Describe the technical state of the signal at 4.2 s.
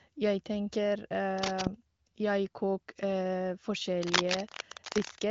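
A worn cable or connector is likely being moved here, its contact resistance changing rapidly and injecting dense, uneven noise bursts from 4.01 to 5.21 s. At 4.2 s this cable scratch noise rasps and rustles over the speech at roughly equal level.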